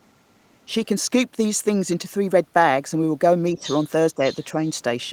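From 0.0 to 0.64 s a very faint second voice, around 40 dB below the main speech, sits underneath it. This is the other side's voice leaking through, likely loudspeaker echo that the echo canceller failed to remove from the microphone signal.

At 3.54 to 3.65 s the speech itself dips by roughly 10 dB for about a tenth of a second. This is speech suppressed in double talk: with both sides active, the canceller likely could not tell the talker from the echo and attenuated everything. The leaked voice then rises to about 15 dB below the speech from 3.58 to 3.87 s.

A second, shorter suppression dip of similar depth follows at 4.15 to 4.22 s. Leakage returns at the same level from 4.23 to 4.44 s, and a brief faint trace, around 35 dB down, appears at 4.65 to 4.69 s.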